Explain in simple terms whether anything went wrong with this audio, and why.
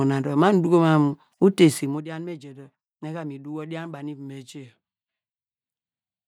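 Nothing went wrong: the recording has no dropouts, clicks, distortion or other technical glitches anywhere.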